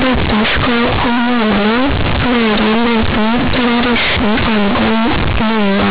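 Speech, and it's rough the whole way through: the classic companded audio read as linear problem. The A-law telephone bytes are being played straight as linear 8-bit samples without expansion, so every sign change swings the output across about half its range. Quiet bits come out as loud as the loud ones, the waveform gets badly bent, and you get harsh, very loud buzzy distortion with heavy noise filling the pauses, all sitting on an 8 kHz-sampled telephone-band signal.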